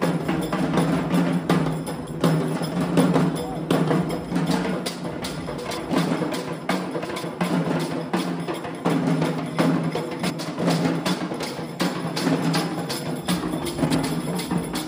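Frames out of order occur at 5.58–5.78 s, 7.04–7.24 s, 10.20–10.40 s and 13.85–14.05 s. Each time, two adjacent blocks of about 93 ms play swapped, consistent with four-frame runs, producing a brief garbled flutter. No time is lost.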